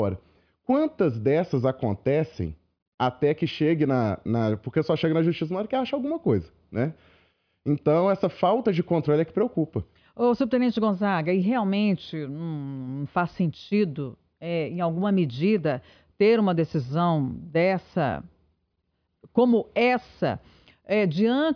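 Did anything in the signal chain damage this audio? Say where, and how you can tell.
No, nothing in the signal chain stood out as damaging this recording when I listened through it.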